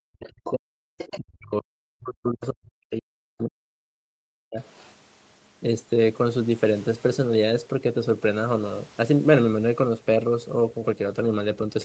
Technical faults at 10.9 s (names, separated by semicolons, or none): none